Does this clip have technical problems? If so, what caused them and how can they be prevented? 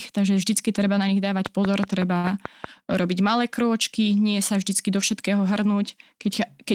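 Yes. Between 1.46 and 2.65 s there is a train of clicks, ending just before "robiť malé krôčky nie". About seven near-identical pulses arrive at a steady 5.35 per second, standing roughly 15 dB above the speech and audible as regular ticking. The even spacing and identical shape most likely point to electrical interference from nearby equipment or a faulty connection or power supply injecting the same transient repeatedly. Prevention: reroute or shield cabling away from noisy equipment, and check the interface's power, grounding and connections.

From 2.17 to 2.26 s there is a short stall from a late packet. A packet arrived late, the jitter buffer ran dry, and the receiver stretched the last sound for 63 ms until the data came in. Playback then resumed from the same point, so nothing is missing, but the sound is held unnaturally long with a slight buzz or dip, and overall delay grows by 63 ms. 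Prevention: give the jitter buffer more headroom, or improve network stability so packets arrive on time.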